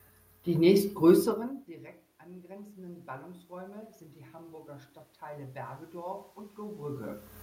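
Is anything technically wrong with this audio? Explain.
Yes, there is one fault. From 1.67 to 7.29 s, voice and room noise swell together by about 9 dB. This is automatic gain rising, as the control slowly compensates for input that dropped about 24 dB.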